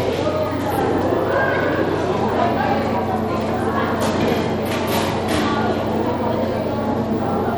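The clip is a recording of sounds. Bluetooth SBC compression damage runs through the whole clip and is plainly audible. The treble is thin and unstable. High detail drops out and flickers back. A gritty noise sits on the sound, with aliasing in the upper range. This is likely the SBC codec at a low bitrate, which fits roughly 96 kbps. At that rate the top sub-bands get few bits, and the rest are quantised coarsely.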